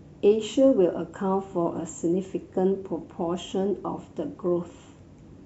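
Speech, with no audible technical faults anywhere.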